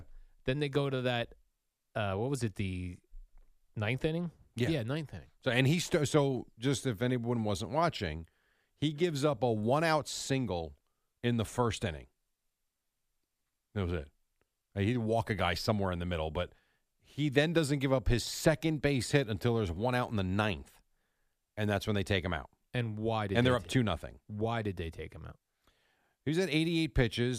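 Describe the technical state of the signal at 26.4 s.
At 26.4 s the speech signal is intact, with no audible technical fault at that moment.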